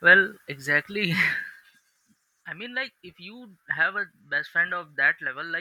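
From 1.40 to 1.92 s the speech level drops by roughly 10 dB with zipper noise. The gain moves in coarse unsmoothed steps, about 100 per second. Each jump clicks, so a fast ticking buzz rides on the speech during the fade.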